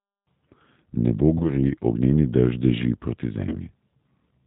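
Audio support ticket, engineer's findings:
G.729 codec throughout the speech. Bandwidth stops near 4 kHz. Rough, slightly synthetic texture with plainly audible codec damage, consistent with an 8 kbit/s G.729A link. Decoder rebuilds speech from a vocal tract filter, pitch predictor and sparse pulses.

VoIP packet loss concealed by the speech codec, at 1.38 to 1.50 s and 3.49 to 3.56 s. Each gap is 20 ms, fitting two lost 10 ms frames. The decoder extrapolates its last pitch and filter, so the sound stretches into a buzzy tone or coloured noise that fades. It stays degraded briefly after packets resume.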